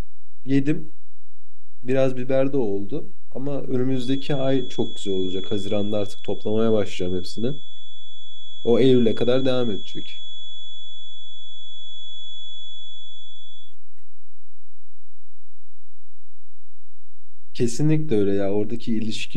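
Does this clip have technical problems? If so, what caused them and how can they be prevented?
Yes. A DC offset runs through the whole speech clip: something in the capture chain, such as a converter or preamp, added a constant voltage, so the waveform sits shifted away from zero by about -16 dBFS. You can't hear the offset itself, but it eats headroom on one side of the waveform and shows up as steady energy at the very bottom of the spectrum, and it can make edits and fades click. To prevent it, use properly coupled hardware and apply a high-pass or DC-removal filter before processing.

From 3.87 s to 13.77 s there is a feedback whistle, likely caused by loudspeaker output reaching the microphone with enough gain to sit right at the edge of feedback without running away. The result is a thin, steady tone at 3.4 kHz, roughly 20 dB below the speech, swelling and fading slowly in level. 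It stops rather than growing into a howl. To prevent it, lower the monitor gain, keep loudspeakers out of the microphone's pickup pattern, or notch out the ringing frequency.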